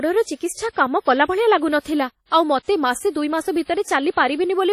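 Throughout, the speech has a washy, ringing quality with breathing hiss, likely WMA compression at a low rate near 32 kbps; the spectrogram shows sparse, blotchy partials and nothing above 14.6 kHz. Pre-echo occurs at 0.36, 1.0, 1.8 and 2.26 s, where codec noise smears 50 to 59 ms ahead of sharp onsets, heard as a short hiss before each attack and visible as a low, fuzzy waveform ramp preceding the transient.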